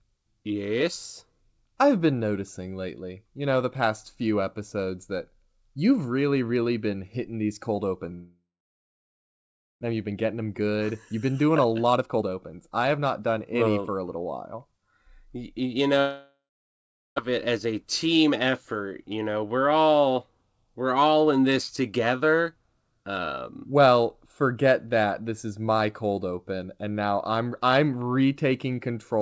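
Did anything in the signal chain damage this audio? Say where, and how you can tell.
Yes. The network stage is likely at fault, with two long network dropouts. The first starts at 8.14 s, right after "been hitting these cold", and lasts until 9.85 s. The last sound is stretched into a fading buzz, then about 1.4 s of near silence follows. Roughly a second of speech never returns. The second runs from 16.00 s to 17.20 s, with about 0.76 s of silence and another second missing.

The jitter buffer then sped the audio up after each gap. Delayed packets had piled up, so the buffer held too much audio. It trimmed short pitch-period slices over and over to cut the excess. From 9.92 s to 14.79 s speech runs about 14% fast, shedding well over half a second. Shorter bursts follow at 17.28 to 18.31 s, at 6%, and at 19.15 to 19.79 s, at 13%. The pitch stays the same, but the talker sounds rushed. The call path carries G.722 at 64 kbps, which fits the lack of anything above 8 kHz.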